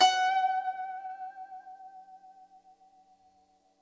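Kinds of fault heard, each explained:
Short stall from a late packet: around 1.07 to 1.12 s the music holds one sound for about 20 ms while the jitter buffer waits, then resumes where it paused.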